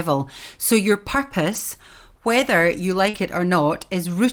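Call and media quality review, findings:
Lost packet rebuilt from error correction, 1.51–1.61 s and 3.14–3.20 s: brief rough, noisy patches with no gap. The jitter buffer/decoder played low-bitrate redundant copies from following packets, consistent with 20 ms frames.

Short concealed packet loss, 3.09–3.16 s: about 40 ms missing, heard as a brief smear in the speech. Decoder concealment extended the preceding sound, then crossfaded into the rebuilt audio that follows.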